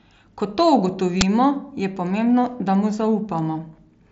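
At 1.21 s there's a quick, loud crack lasting about 10 ms, an uninitialised buffer: a block got played before any real audio was written into it, so leftover memory came out as samples. It sits over speech that tops out near 7.7 kHz, as you'd expect from the mSBC headset link.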